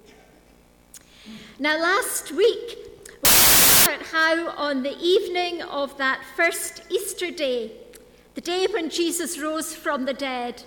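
From 3.25 to 3.86 s the audio turns into loud, harsh broadband noise, a case of samples built from the wrong bytes. The reader assembles each sample with its bytes misaligned or in the wrong order, so the rapidly changing low bits land in the most significant position and dominate every value. On a waveform the section fills with dense, random-looking excursions. A spectrogram shows a wash of energy across a broad range of frequencies for those 0.61 s.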